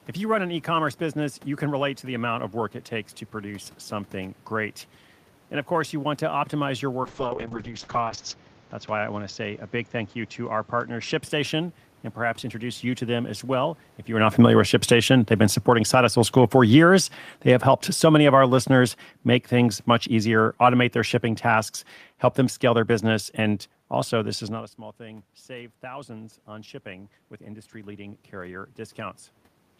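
A speech recording with three system faults. First, a call bitrate drop: from 7.05 s, just after "want to optimize your", the bandwidth estimate fell and the encoder went from 40 to 7 kbps, holding the lowest rate for about 1.3 s, with audio bandwidth narrowed from 20 kHz to 8 kHz. The speech turns rough and muffled until it clears by 11.27 s. Next, automatic gain falling: from 13.49 s, after "you to them as", the gain control judged the input too loud, or its background noise too strong, and lowered its gain by about 15 dB over roughly eleven seconds. Speech and room noise sink together until 24.41 s, ending before "is not a small", while the talker also shifts position around 14 s. Finally, automatic gain rising: after the talker moves around 24.5 s and the input drops by about 18 dB, the gain control raises its gain by about 6 dB between 24.97 and 29.26 s, following "is not a small". 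Voice and background swell together but recover only part of the lost level.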